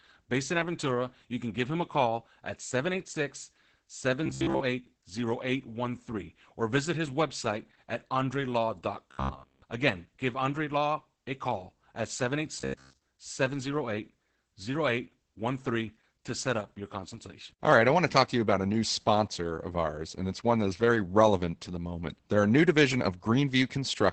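Speech that sounds muffled, hoarse and faintly robotic throughout, with nothing above about 8.6 kHz. This is Opus voice compression in its SILK mode at wideband, heavily damaged by coarse excitation coding, which fits a bitrate around 10 kbps. At 4.26–4.60 s, 9.11–9.62 s and 12.60–13.02 s the sound turns into a rigid metallic buzz at 66.7 Hz, with most of the first and third stretches and all of the second affected. This robotic sound most likely comes from repeated short buffers, with about 15 ms of audio replayed while new audio is late.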